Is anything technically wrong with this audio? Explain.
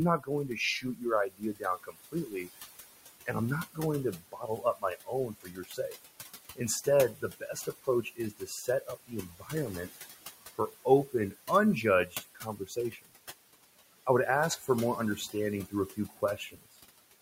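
Yes. A noise suppressor is working hard on this speech, against room noise sitting about 12 dB below the voice.

Noise suppressor artifacts run throughout. The steady background is pulled down by about 18 dB frame by frame, so it dips between phrases and swells beneath them.

Speech cut by the noise suppressor occurs from 0.18 to 2.49 s, 3.26 to 5.96 s, 6.56 to 9.97 s, 10.58 to 13.1 s and 14.06 to 16.76 s. The suppressor mistakes quieter speech parts for noise and drops them by about 18 to 21 dB. Roughly a second in each of the first two spans, a second and a half in the third and 0.7 s in each of the last two sounds swallowed or faint.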